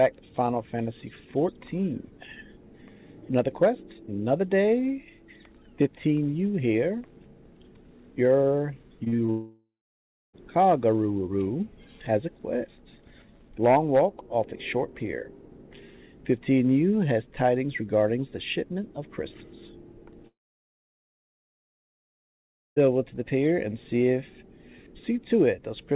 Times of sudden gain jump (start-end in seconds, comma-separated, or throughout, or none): none